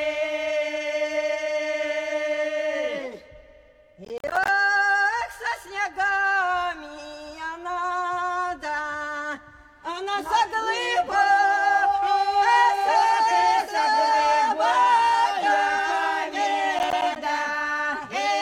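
Gritty crackle tears through the sound from 4.05 to 4.48 s and again from 16.79 to 17.16 s: processor overload crackle, with short buffers of around 10 ms missing their deadlines and dropping out to silence.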